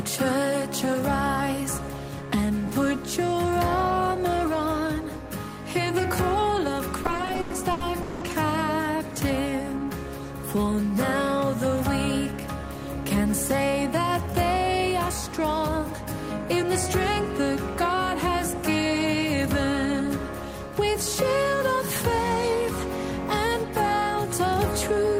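From 7.03 to 8.23 s the audio drags and stutters through 13 short holds, the longest 190 ms. These are repeated stalls: late packets kept emptying the jitter buffer, so sound was stretched over the gaps without losing any.

From 9.50 to 9.86 s the sound slows to 87% speed at unchanged pitch, drawn out by 58 ms. This is a jitter buffer slow-down: repeated pitch periods rebuilt a depleted reserve.

From 13.05 to 13.34 s the sound hurries to 116% speed, pitch intact. This jitter buffer speed-up trimmed about 50 ms of pitch periods to shrink an overfull buffer.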